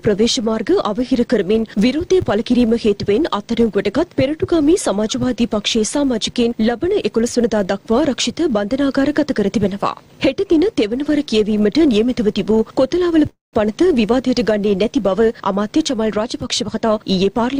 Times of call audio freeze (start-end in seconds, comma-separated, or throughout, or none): 13.29-13.55